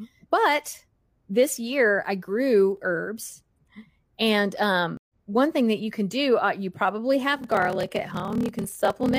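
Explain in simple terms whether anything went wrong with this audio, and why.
Two separate things go wrong in this speech clip.

At 4.97 s the sound drops out for about 0.12 s and picks up again around 5.14 s. This is a stream reconnect: the connection broke, the player went quiet, then reconnected and started decoding afresh partway through the stream. Because the stream kept moving while it was gone, the speech resumes roughly a tenth of a second further on, so a small piece is simply skipped rather than delayed.

From 7.34 s to the end there is a block size mismatch (padded). One stage is handing over shorter chunks of audio than the next stage expects, which fits 1024-sample blocks being written into larger slots, and the leftover space in each slot is filled with silence. Those tiny gaps repeat about 38 times a second, which you hear as a steady buzz under the speech. The gaps also stretch the timing, so this last part runs at about 0.89 times normal speed while the pitch stays about the same.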